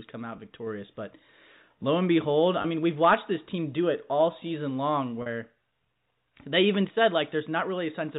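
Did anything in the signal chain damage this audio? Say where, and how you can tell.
Yes, packet loss with pitch repetition on the network: brief buzzy held sounds after "come out" (0.36 s), "lo and behold" (2.62 s) and "it all season long" (5.22 s), where the receiver looped the last pitch period over gaps of about 20, 20 and 40 ms.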